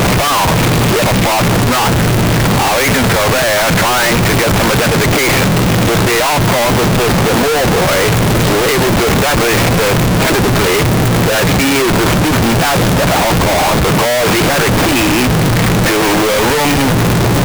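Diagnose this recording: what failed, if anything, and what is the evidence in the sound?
Sample-format conversion: harsh, uniformly loud distortion throughout, quiet parts included, likely signed and unsigned mixed up; the waveform jumps across the whole range at zero crossings and the spectrogram is broadband smear.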